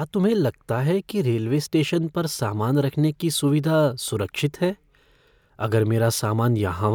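No technical faults can be heard anywhere in the speech.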